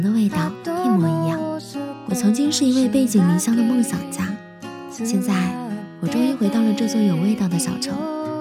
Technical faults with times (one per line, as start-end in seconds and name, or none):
none